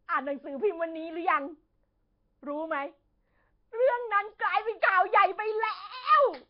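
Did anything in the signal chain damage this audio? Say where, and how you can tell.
Yes: at the codec stage, likely Nellymoser compression starves weak bands of bits throughout, leaving noise-filled hiss, smeared underwater speech and nothing above 5.3 kHz.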